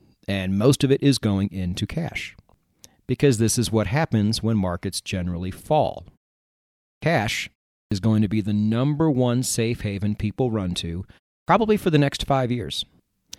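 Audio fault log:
6.98 to 7.02 s, 7.87 to 7.92 s and 11.43 to 11.48 s, clipped start after a pause: the output device drops into a low-power state during short silences of 0.89, 0.4 and 0.32 s and is slow to wake and lock again, so the first 44, 45 and 50 ms of sound are lost. Onsets snap in abruptly out of silence, as at "going to be the" and at "for the next" after "haven people run to".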